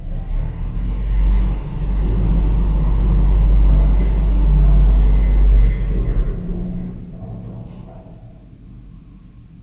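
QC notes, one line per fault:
No fault to note in these sounds.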